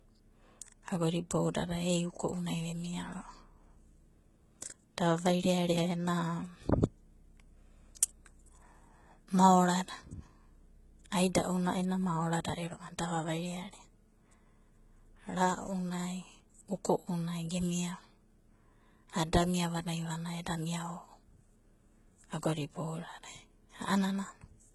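From the start, the speech carries heavy damage consistent with HE-AAC compression, likely at a low bitrate around 16 kbps. The treble is rebuilt by copying lower bands upward, so sibilants sound gritty and metallic. A spectrogram shows repeated, smeared bands and nothing above 11.8 kHz.

From 19.42 s to the end at 24.75 s, sample clock jitter of roughly half a microsecond adds a faint roughness, about 45 dB below the signal. It rises on loud, bright syllables and vanishes in pauses. A spectrogram shows a low noise floor spreading upward only where the speech is present.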